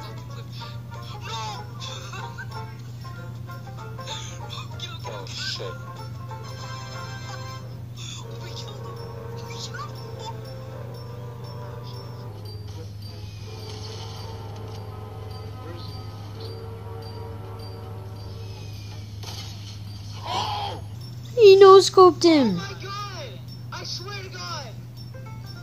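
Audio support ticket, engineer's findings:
Section at the wrong speed, 12.29–20.95 s. Likely playback or edit stage running this segment against the wrong clock, at 0.865x. Sound abruptly slower and about three semitones lower, tempo and pitch dropping together at the boundary, then snapping back.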